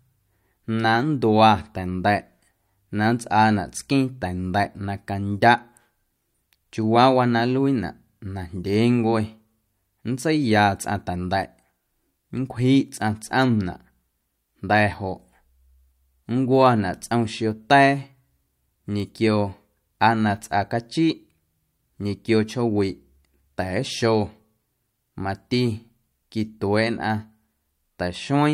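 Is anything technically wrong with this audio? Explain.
Yes. At 19.0 s a single sharp tick cuts through the speech, broadband and unrelated to it. This is a bit error spike: one flipped bit knocked a single sample off by a power of two before the waveform snapped back.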